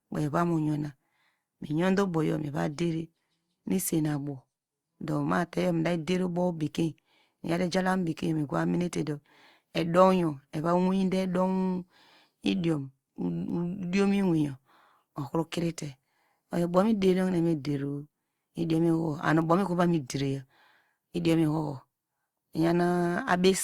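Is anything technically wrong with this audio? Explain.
Yes: the speech shows generation loss throughout. It was likely encoded repeatedly with a lossy codec, something like Opus at about 64 kbit/s, around four passes, each quantising on a shifted frame grid. The errors pile up, leaving swirly, hollow, smeared speech with softened attacks.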